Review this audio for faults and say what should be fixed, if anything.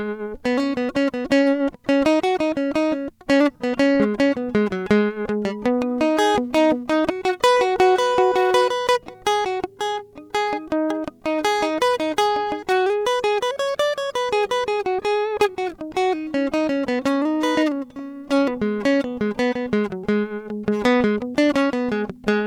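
No faults turn up in the music, so nothing needs to be fixed.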